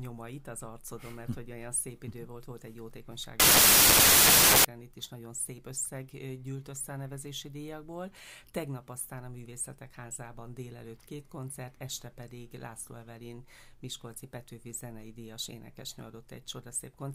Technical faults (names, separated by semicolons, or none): wrong sample width